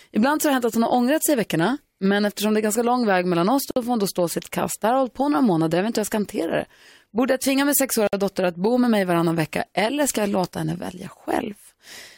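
At 3.71 s, after "lång väg mellan oss", and again at 8.07 s, after "jag tvinga min", the speech drops out for about 56 ms: a gap at a join of encoded pieces, where encoder start delay and last-frame padding were never trimmed. Each shows as a flat waveform stretch and a blank vertical band with smeared edges.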